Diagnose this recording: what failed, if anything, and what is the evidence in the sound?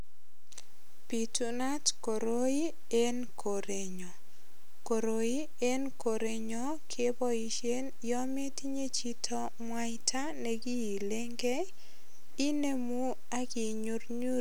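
A DC offset runs through the whole recording, most plausibly introduced at the converter or in the analogue stage ahead of it, where a constant voltage is added to the signal. The speech waveform therefore rides on a fixed shift from zero for the full length rather than centring on it. You cannot hear the offset itself. It shows up as steady energy at the very bottom of the spectrum and as lost headroom on one side of the waveform.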